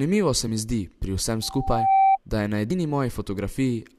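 A speech recording marred by two brief glitches and a howl. At 0.47 s, just before "mi zdi pri", there is a short glitch, and a second blip lands at 2.70 s, right after "da je na". Both are damaged data in a compressed stream: corrupted bytes made the decoder misread those frames, lose sync and skip ahead to the next valid frame header, leaving a tiny glitch. Between 1.42 s and 2.18 s, ending just before "da je na", a steady tone at 778 Hz swells over about half a second to roughly 10 dB above the speech. That is a loudspeaker feedback squeal: the microphone picked up the loudspeaker it was feeding, and at 778 Hz the loop gain exceeded one, so the tone kept feeding on itself.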